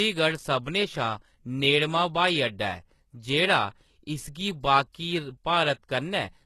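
Throughout the speech, the treble sounds plainly damaged, likely by HE-AAC compression. The upper band is not the original. It is copied up from lower bands and shaped coarsely. S sounds turn gritty and lispy. Nothing remains above 12.3 kHz. The damage fits a bitrate near 16 kbps.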